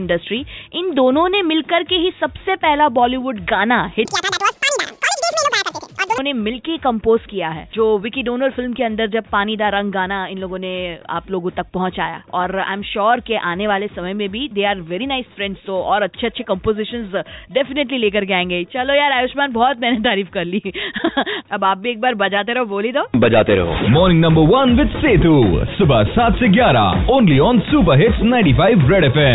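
From 4.05 to 6.18 s, a wrong sample rate fault plays the audio at twice the rate it was captured, which fits 8 kHz material being read out at 16 kHz. Everything in that stretch runs at double speed and jumps a full octave higher, sounding squeaky and rushed.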